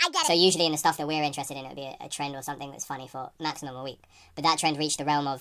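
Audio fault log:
Throughout: wrong sample rate. The speech runs about 1.45 times too fast and sits roughly 6.45 semitones high, so it comes across chipmunky and rushed. Pitch and tempo shift together with no conversion, which fits 22 kHz material being played back at 32 kHz.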